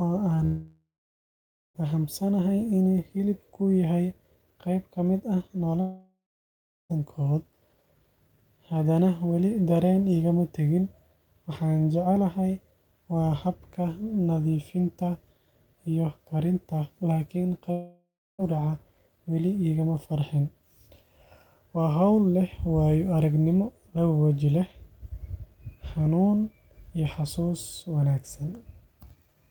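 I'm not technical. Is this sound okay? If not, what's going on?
No. The speech cuts out three times: from 0.45 to 1.77 s, from 5.81 to 6.92 s, and from 17.72 to 18.44 s. Each time, the last sound trails on as a fading buzz or hiss, then goes quiet before the speech resumes with a piece missing (about 1.3 s, 1.1 s and 0.7 s). This is likely a long network dropout: the audio stopped arriving for a while, the player briefly stretched out what it had, and that part was lost.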